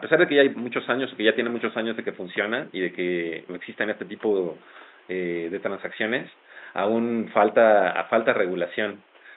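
No technical faults are audible.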